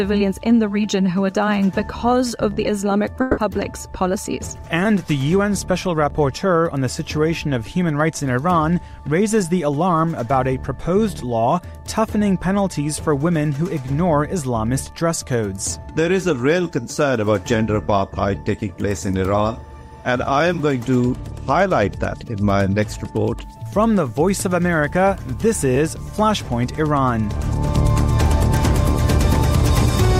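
At 3.21 s the audio breaks off for about 0.18 s. For roughly 160 ms, the last sound is carried on as a fading buzzy smear instead of clean continuation, and it never drops to silence before the audio resumes at 3.39 s with that stretch missing. This is likely a long network dropout with concealment. It differs from a plain mute or an edit because the filler tail is audible, and from a short packet glitch because of its length.

From 23.43 s to 26.25 s the sound turns grainy, with a gritty distortion that rises and falls with the signal and is worst on the quiet parts. The error sits very roughly 40 dB below the signal, which fits truncation to about 9 bits, so this is likely low bit depth without dither. Dithered reduction would leave a steady, even hiss, but here the distortion follows the signal, and quiet passages turn gritty rather than sitting under a constant noise floor.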